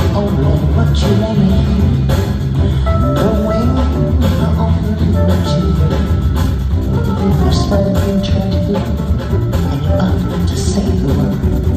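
Software likely compressed the final stretch in time to fit a shorter slot, running it about 1.35 times faster while dropping short pieces to hold the pitch. This time-stretched section runs from 6.38 s to the end, where the pace abruptly quickens and the audio turns rushed while its pitch stays unchanged.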